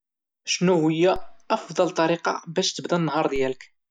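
At 1.16 s, just before "افضل طريقة باش تبدا", a DC step occurs. The waveform's zero line suddenly jumps by about -25 dBFS. That jump is heard as a low thump. The offset then drains away slowly, as a high-pass near 2 Hz would let it. A second DC step follows at 3.36 s, right after "افضل طريقة باش تبدا". It is the same size and decays the same way. It gives another thump, while the speech carries on untouched.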